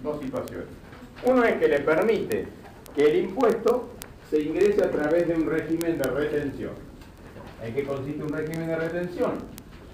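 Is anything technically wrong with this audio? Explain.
Yes: word clock ticks run from 0.12 s to 9.92 s, a steady tick roughly every 20 ms. The receiver's clock drifts around a thousand parts per million, slipping one sample each time.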